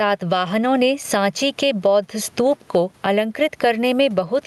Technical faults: gain pumping

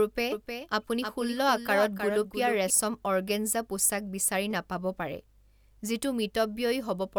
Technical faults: doubled audio track

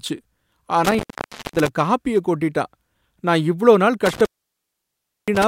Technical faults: intermittent contact

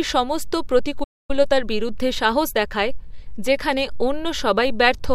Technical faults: playback stall; time-compressed catch-up

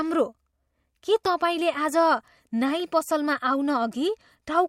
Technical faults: pre-echo

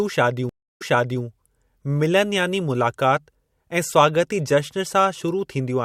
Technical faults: stream reconnect

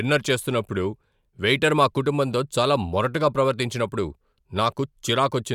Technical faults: none

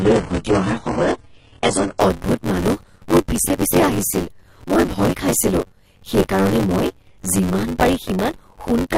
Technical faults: buffer tearing; adaptive stream starting at a low bitrate

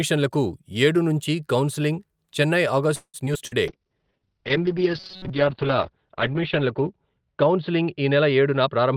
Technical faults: repeated packet loss (robotic sound); jitter buffer slow-down; call bitrate drop; robotic sound from repeated short buffers; jitter buffer speed-up

